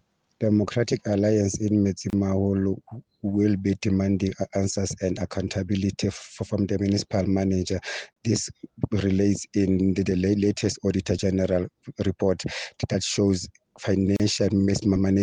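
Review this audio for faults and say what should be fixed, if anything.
The audio was encoded in separate pieces and joined without trimming each encoder run's start-up delay and final-frame padding, so there is a gap at a join of encoded pieces at 2.10 s, 8.13 s and 14.16 s, one every 6 s. Each is a short silence of about 29 ms, 34 ms and 34 ms, with edges smeared by the codec, after which the sound resumes exactly where it stopped. Encode continuously, or trim encoder delay and padding at every join using gapless metadata.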